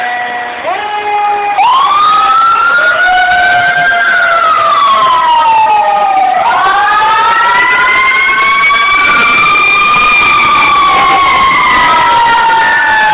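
No technical faults can be heard in the audio, which arrives through a G.711 A-law call path that passes nothing above 4 kHz.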